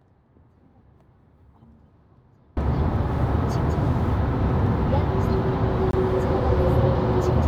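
From the very start until 2.57 s, only a faint trace of the sound remains, about 35 dB below its normal level, before it snaps back at full strength. This audio dropout to a faint residue is likely a loss of the wanted signal while the path after the break stayed live.

At 5.91 s, a brief hole of about 23 ms opens as the sound drops to complete silence and returns without any fade. This block of digital silence fits a 1024-sample buffer that went out as zeros because it was not filled in time.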